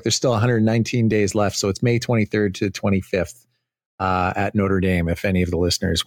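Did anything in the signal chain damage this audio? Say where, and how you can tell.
No, nothing in this speech recording shows damage from the signal chain. No stage, from the wiring and converter through to storage and playback, leaves an audible mark on the sound.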